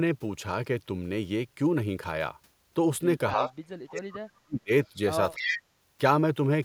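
From 3.33 to 3.51 s the speech dips by about 10 dB. This is speech suppressed in double talk, likely from an echo canceller turning down its own talker along with the loudspeaker echo while both talk. At 3.49 to 3.54 s an echo leak follows. A faint copy arrives 294 ms late, about 30 dB down. It likely slipped past the far-end canceller. From 3.81 to 4.71 s the speech drops again, by up to about 40 dB, likely the same double-talk suppression. At 5.35 to 5.54 s it falls by about 25 dB, likely the same cause. From 5.37 to 5.6 s a strong echo leak, likely from the same canceller, comes back 294 ms late, only about 5 dB below the speech.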